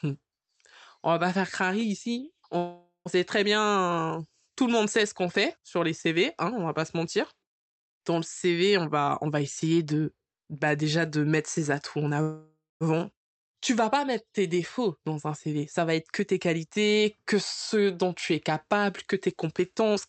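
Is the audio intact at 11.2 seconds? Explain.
No. At 11.2 seconds you're in the middle of a jitter buffer speed-up that runs from about 8.77 to 12.19 seconds. The receiver's buffer had built up more audio than it wanted, so it kept snipping out tiny chunks a pitch period or so long to catch up. Altogether that removes roughly 400 ms. The speech plays at about 112% speed with the pitch unchanged, so it sounds noticeably rushed through that stretch.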